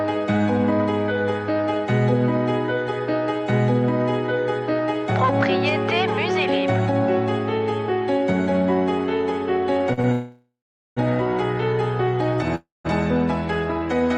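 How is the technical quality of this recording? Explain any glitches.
The recording has network playback faults between about 9.9 and 12.9 s.

Short stalls from a late packet, 9.93 to 9.99 s and 10.01 to 10.06 s: packets arrived late and the jitter buffer emptied, so the last sound was held for 40 ms, then 25 ms, before resuming.

Call audio freezes, 10.12 to 10.99 s and 12.55 to 12.87 s: likely delayed packets starved the buffer, so the sound turns to a fading buzz or hiss, then about 430 ms and 180 ms of silence, before resuming without loss.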